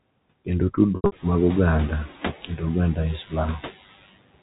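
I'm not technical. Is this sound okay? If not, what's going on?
No, there are two problems.

The first is noise suppressor artifacts, and they last the whole clip. A noise suppressor keeps guessing which parts of the sound are steady background hiss and turns those down heavily, moment by moment. Here the room noise gets noticeably louder from about 1 second on, so the background seems to drop away in the pauses and come back underneath the speech, a pumping effect.

The second is packet loss with pitch repetition, from 0.96 to 1.12 s, just before "mag oganda e". Small chunks of the audio never arrived, several short pieces over a sixth of a second, the longest 80 ms. To cover the gaps, the receiver repeated the last bit of voice and faded it out. You hear a brief buzzy, held sound, then a moment of near-silence before the speech picks up again.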